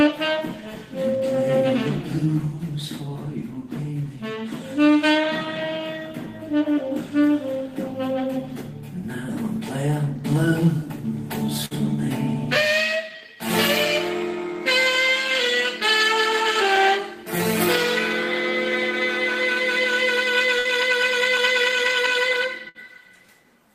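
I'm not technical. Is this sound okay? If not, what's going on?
No. There are three short bursts of packet loss, at 11.65 to 11.74 s, 20.59 to 20.68 s and 22.69 to 22.78 s. Each time, a small run of data was lost in transit, and the player stretched the last bit of sound over the gap for about 55 to 60 ms, fading it. Then the sound resumes with about 60 ms skipped. A plain dropout would go silent, but here you hear a brief held buzz or hiss instead.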